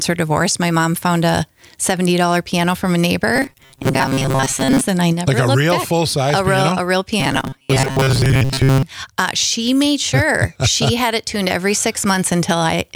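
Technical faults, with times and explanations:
3.36 to 4.81 s and 7.20 to 8.83 s, robotic sound from repeated short buffers: in both stretches the sound takes on a rigid, metallic buzz at 134 Hz, a fixed pitch that doesn't move with the material. It likely comes from audio arriving too seldom, so about 7.5 ms pieces are looped over roughly two thirds of the time while the real signal is skipped. Unlike gaps or stutter, the sound never drops out.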